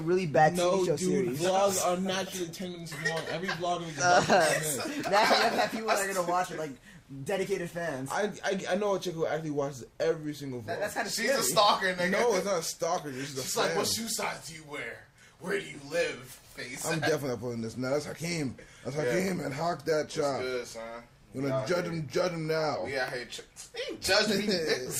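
No technical faults can be heard at any point in the audio, and the signal stays steady and continuous throughout.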